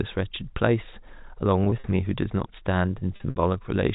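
Packet loss with pitch repetition occurs from 1.64 to 1.84 s (80 ms lost, runs up to 40 ms) and from 3.16 to 3.36 s (120 ms, runs up to 60 ms). The receiver repeats the last pitch period across each gap. This produces a brief buzzy, held tone, though the 60 ms run outlasts the roughly 50 ms fade and drops into silence before the speech cross-fades back.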